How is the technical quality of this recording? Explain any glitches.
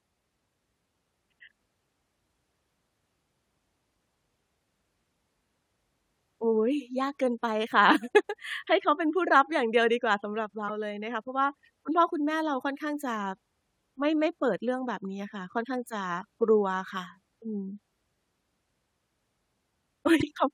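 The recording has two short glitches, both from damaged data in a compressed stream. They occur at 10.65 to 10.70 s and at 20.18 to 20.24 s. At each point, corrupted bytes make the decoder lose frame sync and hunt for the next header, leaving a brief disruption of about 56 ms in the speech.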